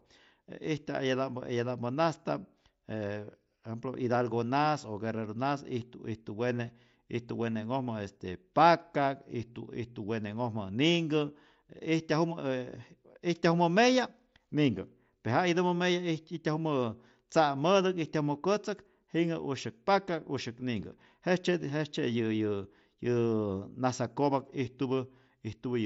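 Nothing goes wrong anywhere in this speech recording, which simply comes through an ordinary Bluetooth mSBC headset link doing its usual job.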